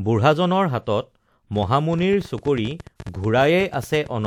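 From 1.56 s to 4.26 s a train of clicks runs over the speech: around thirty similar pulses at about 12.3 per second, spaced irregularly and roughly as loud as the speech itself. They tick through the pauses too. The likely cause is interference from nearby equipment, or a faulty connection or power supply.

At 2.97 s to 3.00 s there is pre-echo: a hiss lasting about 33 ms precedes a sharp attack. The codec spread quantisation noise across a whole block, so noise sized for the loud onset leaks into the quiet moment before it, smearing the attack.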